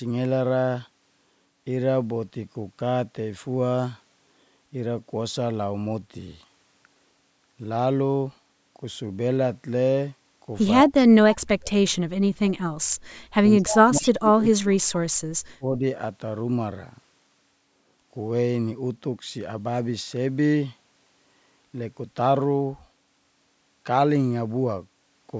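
From 10.84 to 11.77 s the speech sinks sharply, falling by roughly 40 dB. It happens again from 13.58 to 14.9 s with a similar depth, and once more, more briefly and shallowly, from 15.54 to 15.83 s, at about 20 dB down. This pattern is speech suppressed in double talk, likely caused by an echo canceller that could not tell the local talker from the far side's sound and turned everything down while both spoke.

Inside the second dip, at 14.03 to 14.11 s, a short, faint scrap of the voice returns about 0.2 s late, well below the level of the live speech. This is an echo leak, likely from a speakerphone whose echo canceller let part of the loudspeaker's playback back into the microphone and send it down the line.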